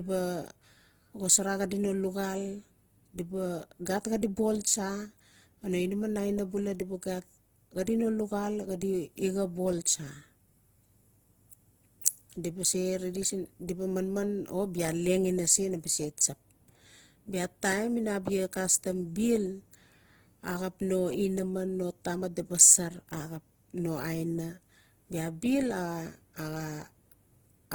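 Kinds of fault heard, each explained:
Opus compression: Tones in the speech come out rough and grainy rather than swirling, with plainly audible codec damage even though content reaches about 20.3 kHz. This points to a band-energy codec filling starved bands with noise, likely Opus in music mode, at a rate around 16 kbps.
Pre-echo: At about 12.01 s a sharp onset is preceded by a short hiss spreading roughly 12 ms ahead of it. The transform block's quantisation noise, scaled for the loud attack, leaks into the quiet moment before it and softens the transient.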